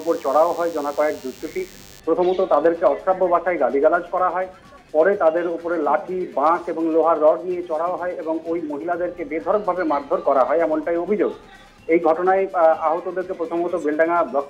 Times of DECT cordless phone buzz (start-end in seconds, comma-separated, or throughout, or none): 0.00-2.00